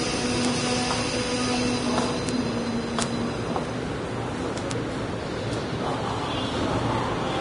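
From the start and through the whole clip, the treble is grainy and hissy, with nothing above about 10.6 kHz. Textures turn to a rough noise of similar loudness, tones sound roughened, and attacks are smeared. The likely cause is heavy Vorbis compression at a low bitrate, around 31 kbps. The codec keeps a smooth spectral envelope but quantises the high-band detail so coarsely that it comes back as noise. Simple low-pass filtering would sound dull but clean, not hissy.

Bit error spikes occur at 0.45, 2.29, 3.02 and 4.71 s. Each is a single sharp, full-band tick with no relation to the surrounding sound. A flipped bit makes the waveform jump by a power of two for one, two or three samples before it returns. The tick at 4.71 s spans three samples. Unlike a dropout or buffer glitch, the sound doesn't stop or repeat around these ticks. The error lasts only one or a few samples and then disappears.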